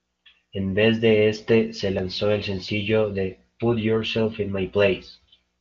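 No technical faults can be heard in this speech recording. It carries the band-limited sound of AMR wideband (HD Voice) coding, and the damage from it is faint at most, which points to one of the codec's higher rates.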